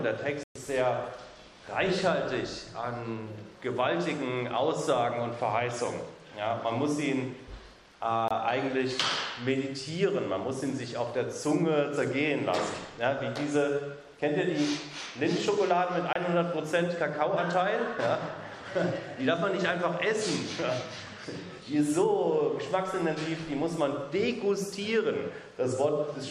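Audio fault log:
0.43–0.56 s, 8.28–8.31 s, 16.13–16.16 s: digital broadcast dropout. The sound mutes abruptly three times and resumes later in the programme with the intervening material missing. The first hole lasts about 120 ms, and the other two are about 30 ms each. The receiver evidently lost the signal or rejected corrupted frames and stayed silent until valid frames arrived. The short gaps suggest a single lost frame of about 24 ms, and the first suggests roughly five consecutive frames.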